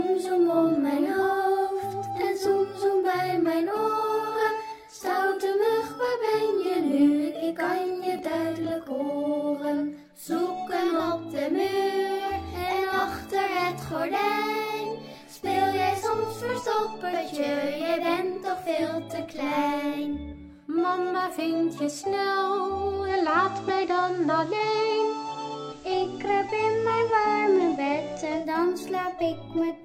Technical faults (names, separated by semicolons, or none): digital radio blending to analogue